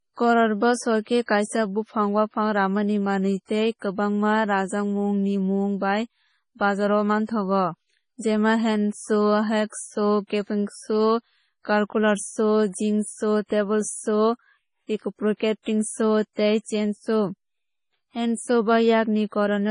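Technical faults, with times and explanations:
Throughout, MP3 compression: the speech stops dead above 10.5 kHz and has a watery, swirly texture as weak frequency detail drops in and out from frame to frame. Damage this heavy likely comes from a starved encoder, which fits about 24 kbps.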